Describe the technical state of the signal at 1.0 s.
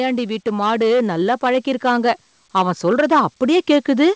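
At 1.0 s the speech is being hit by hard clipping, which runs through the whole clip. It's driven about 7 dB past what the stage can pass, so roughly one sample in twenty gets its peak sliced flat, and those flat tops add harsh harmonics far up the spectrum.

It also sits inside a stretch of automatic gain rising that starts at 0.44 s and keeps going to the end at 4.15 s. The gain control judged the input too quiet and is turning it up slowly, so the voice and the background swell together. Nothing is heard above 8 kHz, which fits the G.722 call path.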